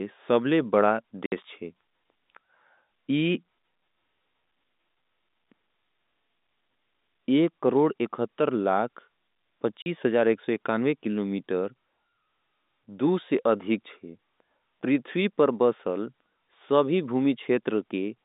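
Packet loss filled with silence cuts 60 ms at 1.26 s after "सबले बड़ा" and 40 ms at 9.82 s, which fits 20 ms packets, leaving hard-edged holes in the telephone-band speech.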